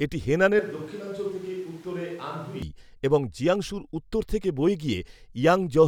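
From 0.59 to 2.62 s, the speech turns hollow, thin and about 10 dB quieter. This is likely a switch to a distant microphone. The distant sound begins just before "এবং জিয়াংসুর উত্তর থেকে".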